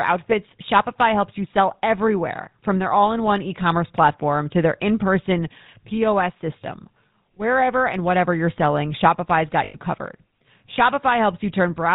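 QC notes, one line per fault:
Throughout: GSM full-rate codec, a buzzy, gravelly roughness from pulse-driven vocal-tract modelling that fits a 13 kbps coder; the spectrogram shows nothing above 4 kHz.
9.64–9.78 s: lost GSM frames, a metallic ring as the last good frame repeats, fitting roughly five 20 ms frames; the spectrogram shows smeared repeated bands.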